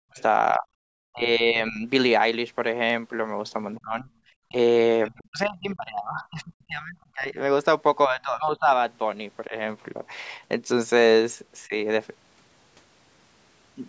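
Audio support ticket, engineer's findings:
Speech suppressed in double talk at 0.00–1.86 s, 3.81–9.55 s and 11.68–11.74 s: talker dips or drops out in pieces, deepest around 40 dB. Likely echo canceller attenuating both talkers during overlap.

Other side's voice leaking through at 0.14–0.22 s, 3.75–3.79 s and 5.06–5.22 s: faint scraps of a second voice, roughly 30 dB under the talker. Likely residual loudspeaker echo left by the canceller.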